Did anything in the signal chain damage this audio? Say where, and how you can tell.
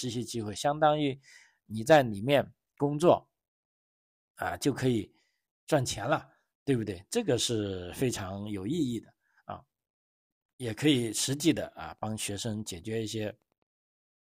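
Yes, in the analogue wiring. From 11.01 to 13.70 s the speech carries Wi-Fi interference: faint ticks, about 50 dB below the signal, every 102.4 ms, as the circuit rectifies a nearby radio's beacon. That ten-per-second rhythm distinguishes it from GSM buzz at 217 Hz.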